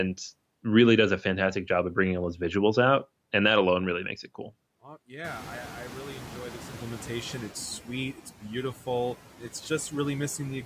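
Noise suppressor artifacts run through the whole clip. The suppressor cuts each frequency band it judges to be steady noise by about 11 dB, frame by frame. The background sinks between phrases and swells under the speech.

Around 5 s, the room noise jumps by about 21 dB, which is real background in the room. From 5.24 to 7.55 s, the noise suppressor is catching up. Its noise estimate lags, so the louder noise at first gets only about 6 dB of cut. It then sinks as the estimate adapts over 2.31 s, just before "sweet it's beautiful".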